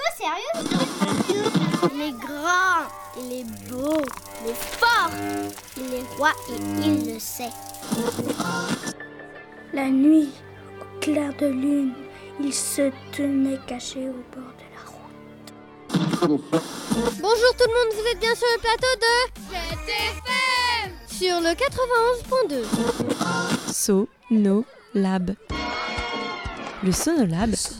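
No technical faults are audible.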